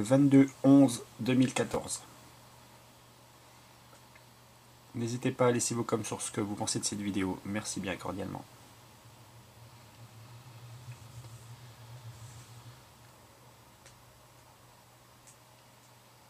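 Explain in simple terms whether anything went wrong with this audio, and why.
At 1.74 to 1.76 seconds there is a brief jumbled moment caused by chunks out of order. A tiny 10-millisecond slice of sound arrived one slot late, so it plays just after the slice that should have followed it. Unlike a dropout, nothing is missing: every bit of sound is still there, only swapped. The swap leaves three abrupt joins packed into that short stretch, which is what makes it sound scrambled rather than silent.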